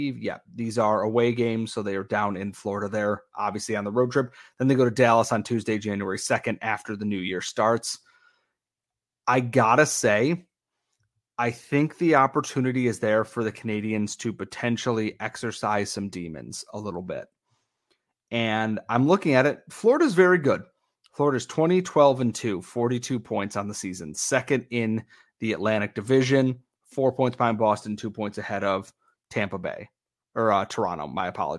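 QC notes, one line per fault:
No faults found on listening to this speech clip.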